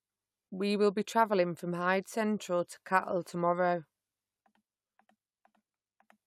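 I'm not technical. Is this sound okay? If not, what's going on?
Yes, this speech recording sounds fine. There's nothing wrong in it that needs fixing.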